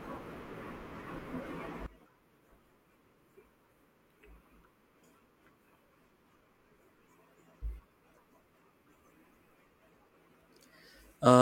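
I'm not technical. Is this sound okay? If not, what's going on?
No. From 1.86 s until the end, the speech suddenly becomes much quieter and faint. The likely cause is one channel inverted. One stereo side is flipped upside down, so when both sides are combined, the voice largely cancels itself out.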